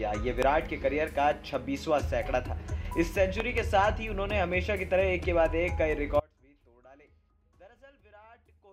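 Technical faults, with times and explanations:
0.42–0.45 s and 3.40–3.60 s, loud pop: A single sharp pop lands first, then a quick pair, each peaking about 15 dB above the sound, which carries on beneath. A sudden voltage step, likely from a plug, switch or static discharge, was added and briefly shaped by the following circuits.
6.2 s to the end, audio dropout to a faint residue: The sound cuts off abruptly and does not return. Only a faint leak remains, roughly 30 dB below normal level. The signal feed was likely lost while the path downstream stayed live, so the gap holds residue rather than true silence.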